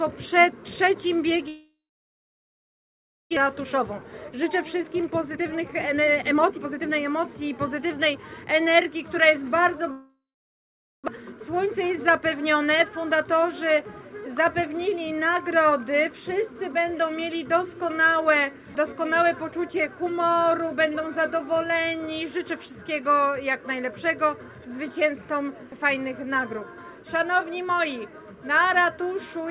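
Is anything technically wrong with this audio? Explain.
Yes. The audio has two long network dropouts at 1.48 to 3.39 s and 9.92 to 11.10 s, likely from packets that never arrived. Each begins with a fading buzz or hiss, then a flat near-silent waveform for about 1.5 s and then 0.8 s, and about 1 s of audio is skipped.

Jitter buffer speed-ups follow each gap, at 3.46 to 8.46 s (117%) and 11.18 to 13.07 s (106%). Repeated trimming of pitch periods hurries the sound at unchanged pitch, giving compressed spectrogram patterns. Throughout, an empty band above 4 kHz points to a G.711 call codec.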